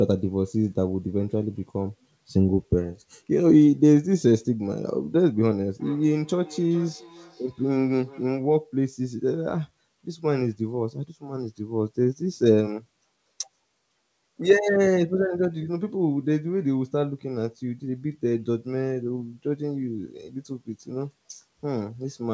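From 5.8 to 8.37 s there is feedback echo between two devices: a second device replays the sound, the first device's microphone catches it, and it returns roughly every 0.4 s, thinner and ringing, about 22 dB below the speech. A spectrogram shows faint, evenly spaced copies trailing each burst.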